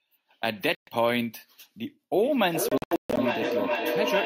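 At 0.75 s the speech drops into silence until 0.90 s, then picks up further along as if it had kept playing: a Bluetooth dropout, likely from about 122 ms of packets arriving too late.

From 2.21 s to the end, a tone near 700 Hz swells and pulses roughly every 400 ms, peaking about 2 dB below the speech. This is feedback howl, where a microphone-to-loudspeaker loop gains level on each pass.

Inside the howl, from 2.69 to 3.19 s, the audio breaks into scattered gaps totalling 320 ms, the longest 137 ms. This is another Bluetooth dropout, likely from late packets being discarded.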